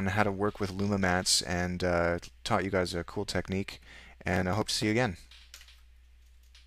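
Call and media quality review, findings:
Processor overload crackle, 4.29–4.87 s, about 0.58 s. Dense gritty tearing over the sound, then stopping. Probable component: audio processing thread or DSP. Many tiny skipped gaps, fitting very short buffers around 1.5 ms, a few dozen missed over the span. Unlike packet-loss dropouts: no audible silences or smeared concealment, just rapid hard-edged clicks. Unlike clipping: independent of level.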